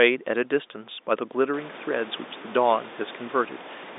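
Nothing technically wrong can be heard in this speech recording. It has the narrow sound of a G.711 telephone line, with nothing above about 3.8 kHz, and the room noise swells by about 19 dB around a second and a half in, settling about 19 dB below the speech.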